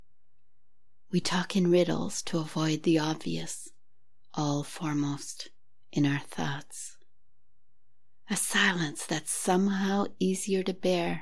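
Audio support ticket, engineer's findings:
No faults found on listening. Nothing to trace to capture, processing or transmission for this ticket.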